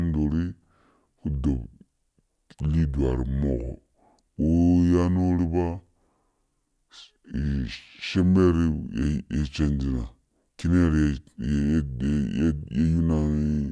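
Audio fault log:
Throughout: wrong sample rate. The speech runs at 0.69 times normal speed and sits about 6.45 semitones low, sounding slow and deep, because samples are clocked out slower than they were captured, consistent with 32 kHz material played at 22 kHz without conversion.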